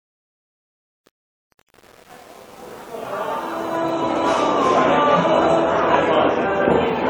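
From 0.0 s to 4.24 s, truncation distortion on the fade-in makes the quiet opening gritty, worst up to 4.04 s. The gain stage drops low bits without dither, coarse enough to fit an 8-bit stage.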